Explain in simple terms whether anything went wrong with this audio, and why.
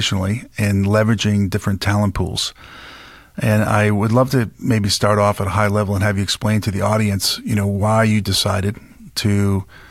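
Nothing in this recording stood out as a problem on listening.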